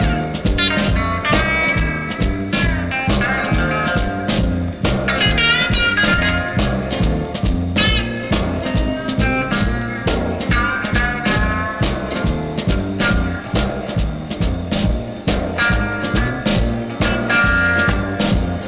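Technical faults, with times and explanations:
No technical faults are audible anywhere in this audio.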